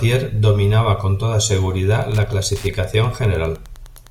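A nearby Wi-Fi radio is coupling into the audio circuit of this speech recording, which rectifies its beacon every 102.4 ms. From 1.85 s, just after "dominaba con toda", through to the end, Wi-Fi interference adds steady ticking about ten times a second, roughly 30 dB below the speech.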